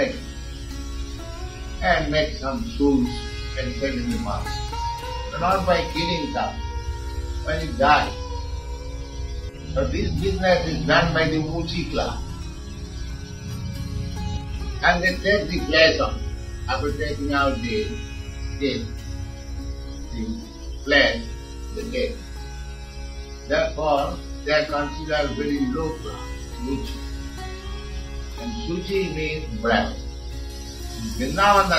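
From about 30.50 s to the end at 31.79 s there's pre-emphasis left on, matching a standard FM 50 µs curve. The treble boost went in but the de-emphasis never came back out, so 10 kHz sits about 10 dB hot, making it thin, bright and sibilant.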